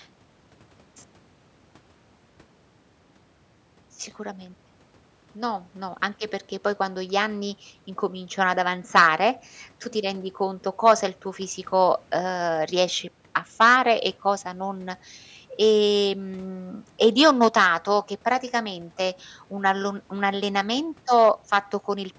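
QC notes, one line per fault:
No faults found; the speech sits within the call microphone processing's normal band, with nothing above 8 kHz and the lowest bass trimmed by its high-pass filter as expected.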